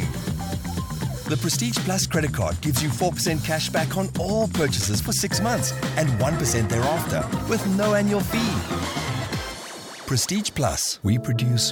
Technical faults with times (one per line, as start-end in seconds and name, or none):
3.94-4.83 scattered short gaps